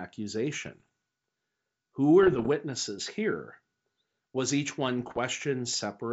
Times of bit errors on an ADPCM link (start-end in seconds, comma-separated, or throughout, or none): 0.60-0.88, 2.23-2.48, 4.99-5.20